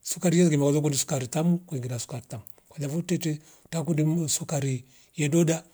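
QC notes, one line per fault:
Nothing to flag on this speech recording; every listen came back with no faults to log.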